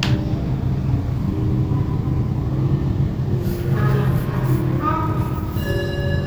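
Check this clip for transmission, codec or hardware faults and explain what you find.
No transmission, codec or hardware faults are audible anywhere in this sound.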